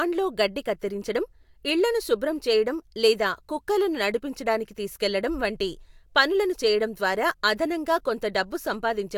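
Speech recording with no technical faults present.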